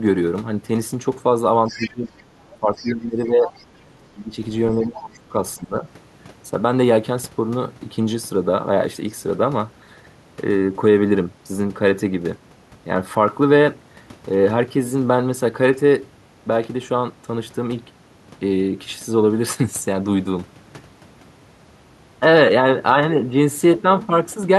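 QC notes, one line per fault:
1.67–2.23 s, 2.75–2.89 s and 3.48–3.63 s: other side's voice leaking through. A faint second voice sits about 15 to 25 dB under the talker. Likely loudspeaker echo the canceller missed.
1.71–2.15 s, 2.6–4.37 s and 4.86–5.86 s: speech suppressed in double talk. The talker drops by up to about 20 dB, in pieces. Likely the echo canceller ducking both voices together.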